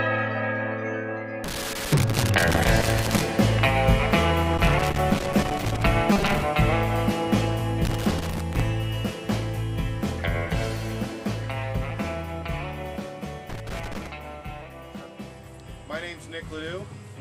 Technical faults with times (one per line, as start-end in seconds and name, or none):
1.44-3.24 loose connector crackle
4.54-5.87 loose connector crackle
6.12-6.43 robotic sound from repeated short buffers
7.85-8.60 loose connector crackle
13.49-14.07 loose connector crackle